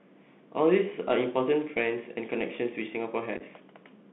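Throughout, the speech passes through a Bluetooth CVSD headset codec, which fits a 64 kbps link. The sound is confined to 200 Hz–3.5 kHz, and its adaptive one-bit steps bring scratchy sibilants and granular hiss. From 3.37 to 3.42 s, unconcealed Bluetooth headset packet loss drops around seven packets, about 26 ms within 38 ms, as short abrupt-edged holes of up to 7.5 ms.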